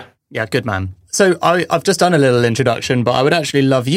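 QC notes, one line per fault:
No faults heard anywhere in the speech.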